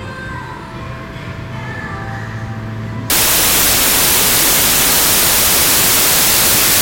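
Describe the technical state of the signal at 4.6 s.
At 4.6 s the wrong sample width fault (3.1 s to the end) is active: 32-bit samples read as 16-bit. This produces loud broadband noise, half speed and an octave lower, with a dense waveform and a smeared spectrogram.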